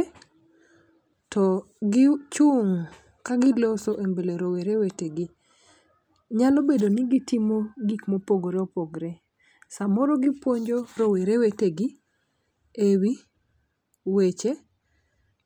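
Nothing stood out as a technical fault on listening to this speech recording.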